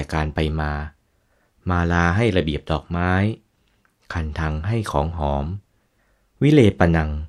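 A speech recording with nothing technically wrong with it.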